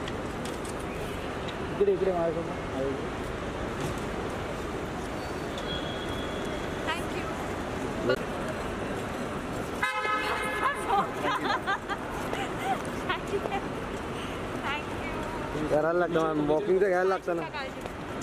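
No technical faults can be heard anywhere in the audio. Nothing in the sound points to a problem with how it was captured, processed or carried.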